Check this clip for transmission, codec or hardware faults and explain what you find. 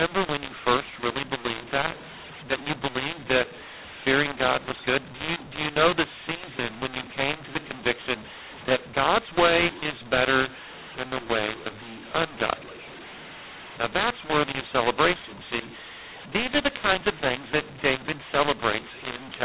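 One fault runs through the whole clip. The mu-law and A-law mix-up spans the entire speech: A-law samples decoded as mu-law scramble levels, making the speech harsh and filling pauses with noise.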